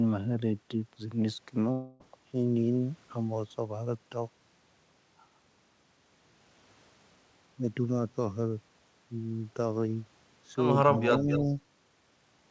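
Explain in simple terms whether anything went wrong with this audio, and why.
Two things go wrong here. From about 1.72 to 2.02 s the speech gives way to a fading buzzy smear for roughly three tenths of a second, then picks up again with that bit simply gone. That's a long network dropout, most likely packets that never arrived, with the receiver papering over the gap.

Then, from about 10.95 to 11.40 s, you can hear a fainter, delayed copy of the speech trailing the original by about a quarter of a second. That's an echo leak, likely a speakerphone on the far end whose echo canceller let some of its own playback slip back into the call.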